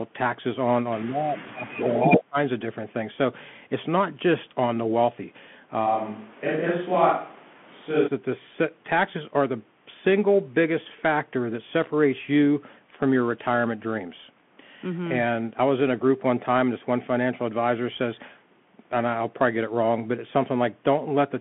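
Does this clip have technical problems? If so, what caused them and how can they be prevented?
Yes, there are four kinds of problem here.

The whole clip goes through a Bluetooth CVSD headset codec, and the damage is plainly audible. The sound is squeezed into a phone-line band of roughly 150 Hz to 3.4 kHz, with nothing above 3.8 kHz. CVSD sends just one bit per sample saying up or down, with an adapting step size, which fits a 64 kbit/s link. Fast, bright sounds outrun that step, so sibilants turn scratchy and there's a grainy hiss underneath. To prevent it, use a wideband Bluetooth mode (mSBC or LC3) or a wired headset.

From 1.04 to 2.38 s the speech is suppressed in double talk, likely because the far end was talking at the same moment. The echo canceller couldn't tell its own talker from the loudspeaker echo, so it ducked everything. The speech dips by as much as about 25 dB and drops out in pieces adding up to roughly a second. 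To prevent it, use a headset on this side instead of a loudspeaker, or switch to an echo canceller with better double-talk handling.

There are two bursts of echo leak inside that same stretch, likely from the far side's speaker bleeding into its microphone with the canceller not removing all of it. Both come back about 75 ms late. The first is brief, at 1.81 to 1.85 s, sitting about 10 dB under the speech. The second runs from 2.09 to 2.21 s and is actually louder than the speech, by about 5 dB. To prevent it, the far side should use headphones instead of a loudspeaker.

From 5.88 to 8.06 s there's a switch to a distant microphone, likely because the close mic dropped out and the recording fell back to one further away. The level barely changes, but the sound turns roomy and hollow at once, with room noise only about 25 dB below the speech, and it snaps back just as suddenly. To prevent it, check the close mic's connection and battery, and monitor which input is actually live.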